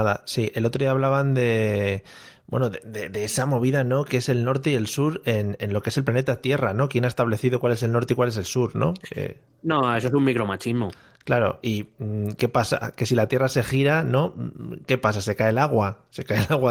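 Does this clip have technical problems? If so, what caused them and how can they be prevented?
No, this speech has no technical faults to fix.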